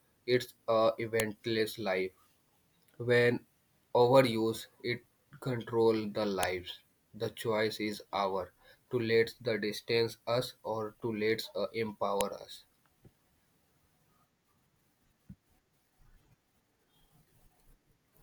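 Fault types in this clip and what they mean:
File header played as audio at 1.2, 6.43 and 12.21 s: a new WAV piece was joined on each time with its header left in, so those few dozen bytes play as samples and snap out as a sharp, loud click.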